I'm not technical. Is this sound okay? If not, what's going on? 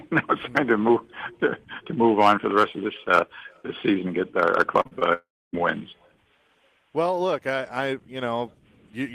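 No, there are two kinds of glitch close together. Short concealed packet loss: around 4.81 to 4.93 s and again at 4.99 s, tiny bits went missing and got patched over, so the sound briefly smears or wobbles. Then at 5.13 to 5.55 s there's a gap that sounds like a long network dropout: the sound trails off as a fading buzz, goes quiet for about a quarter second, and picks up again with a piece missing.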